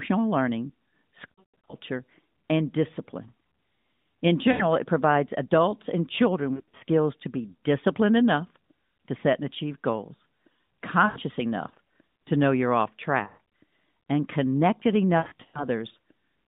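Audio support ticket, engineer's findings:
Lost AMR speech frames, six events: 1.32–1.74 s, 4.52–4.66 s, 6.54–6.83 s, 11.06–11.18 s, 13.24–13.47 s, 15.18–15.64 s. Symptom: audio smears, drags, fades toward silence, then returns weak and rough. Worst at 1.32 s and 15.18 s, about 280 and 260 ms lost in scattered runs. Component: radio link into the AMR-NB decoder. Mechanism: frames fail checksum. The decoder repeats the last good pitch and vocal tract settings at falling gain. Line band is 150 Hz to 3.7 kHz, lightly coded.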